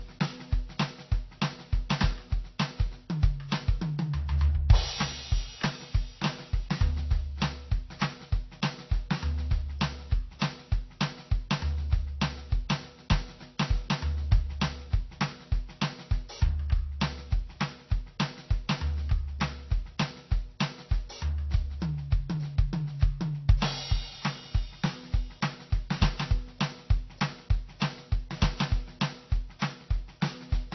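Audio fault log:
Throughout: transcoding between lossy codecs. The music carries smeared, swirly artefacts from one low-rate coder layered with a second set from another, and nothing is heard above 5.9 kHz. The chain is likely MP3 at 32 kbit/s re-encoded to AAC-LC at 32 kbit/s, the second encoder wasting bits on the first's damage.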